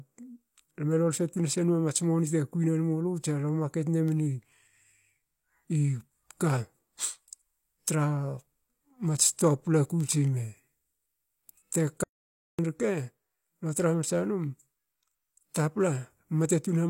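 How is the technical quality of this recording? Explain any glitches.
The recording has one clear glitch, an audio dropout to silence running from about 12.03 s to 12.59 s. For roughly 0.55 s the speech cuts off abruptly and the signal falls to silence, then resumes just as suddenly partway through. The likely cause is a brief loss of input, such as a device or link interruption, while recording carried on and wrote empty samples. What sets it apart from a natural pause or a noise gate is that the room tone vanishes completely, leaving dead silence rather than quiet background, and the speech from that span is simply missing.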